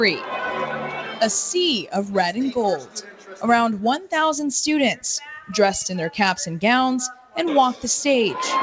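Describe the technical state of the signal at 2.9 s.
At 2.9 s the signal sits inside a stretch of sound cut by the noise suppressor, from 2.77 to 3.44 s. The speech-oriented suppressor mistook sustained content for noise and pulled it down by up to about 12 dB. Unlike a dropout, the sound thins rather than vanishing, with onsets surviving. Underneath, the noise suppressor applied to music or sounds keeps pumping throughout, with gain swinging by roughly 10 dB. That swing, not a steady compressor-like gain change, gives the fluttering, sinking tails.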